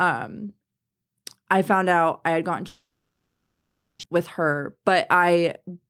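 From 2.67 s to 4.05 s the speech breaks off in what sounds like a long network dropout, likely caused by a stall in packet delivery. The receiver extends the last sound as a fading buzz or hiss, after which about 0.52 s of near-silence remains across the roughly 1.36 s gap. When audio resumes, about 0.92 s of the original speech is gone, and playback now sits around 0.4 s later than before.

From 4.15 s to the end at 5.90 s there is a jitter buffer speed-up. After the dropout the buffer holds more audio than its target, so the receiver trims short pitch-period-sized pieces again and again to shed the excess. Speech runs at about 109% of normal rate with pitch unchanged, sounding hurried, and roughly 0.15 s is removed in total.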